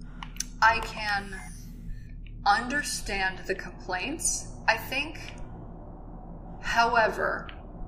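No technical fault can be heard anywhere in this audio. Nothing in the signal breaks, drops out or shifts at any point.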